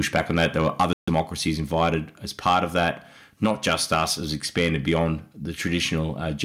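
A speech recording that keeps running into microphone overload: the loudest peaks get their tops sheared off, giving a harsh crackly edge from 0.0 to 1.2 s, then again at 1.8 to 1.88 s, 2.46 to 2.88 s, 3.43 to 4.03 s, 4.57 to 4.66 s and 4.92 to 5.06 s. It's peaks pushing about 1 to 6 dB past the converter's ceiling, likely from input gain set too high, with only a small slice of samples actually flattened. At 0.82 s there's a microphone volume step-down: level, background included, drops by about 3 dB in one go, likely the call software reacting to that clipping. Then from 0.93 to 1.09 s comes a Bluetooth stall, with the sound cutting to silence for about 144 ms before carrying on, likely the headset's buffer running dry while interference held up packets.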